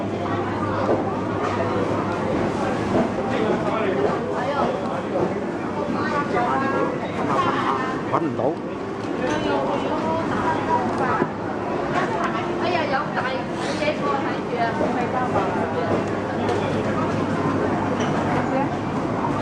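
No technical faults can be heard at any point in the clip.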